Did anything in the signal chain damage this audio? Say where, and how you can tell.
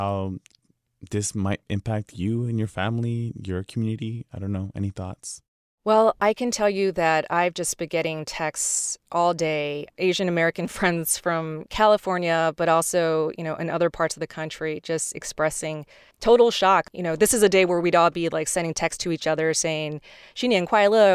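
No, nothing in this speech recording stood out on listening as damage introduced anywhere along the signal chain.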